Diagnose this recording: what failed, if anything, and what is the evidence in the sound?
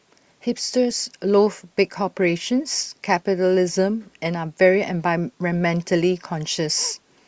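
Nothing failed: no stage of the chain, from capture through to playback, leaves a mark on this speech recording. There is no audible event anywhere in it that would count as evidence of a fault.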